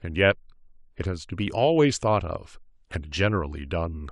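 Nothing stood out on listening to this speech recording.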